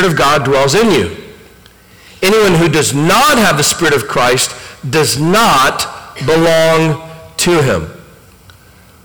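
Hard clipping runs through the whole speech clip. The level sits about 26 dB above what the stage can pass. Nearly a third of the samples are cut flat. The flat tops add high harmonics. Every loud syllable sounds harsh and fuzzy.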